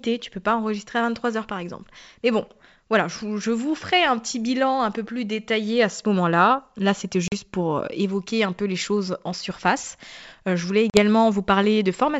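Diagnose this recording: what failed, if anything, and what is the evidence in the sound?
Packet loss on an ADPCM call, at the network stage, appears twice: at 7.28 to 7.33 s and at 10.90 to 10.99 s. Each time about 40 ms of speech drops out abruptly into silence, which fits roughly two lost packets. Because the decoder keeps adapting its predictor and step size from received data, the gap leaves its state out of line with the sender's, and the speech resumes distorted until it re-converges. The G.722 wideband coding itself carries clear speech.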